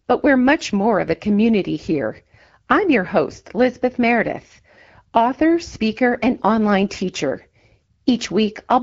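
At 1.08 to 1.16 s, and again at 6.16 to 6.24 s, the speech briefly turns hoarse and gargly, a scratchy burst lasting about 80 ms while pitch and loudness roughly hold. These are AMR bit errors. A few percent of the weakly protected bits in each short run of wideband AMR frames arrived flipped, so the excitation pulses landed in the wrong places and the fine pitch, gain and spectral values decoded wrongly.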